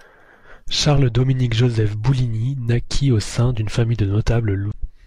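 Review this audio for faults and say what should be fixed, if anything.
Damaged data in the compressed stream from 4.69 to 4.75 s makes the decoder lose frame sync and hunt for the next header, leaving a brief 60 ms disruption in the speech. Verify the file or stream with checksums and reliable transport, and keep metadata such as stream titles out of the audio frames.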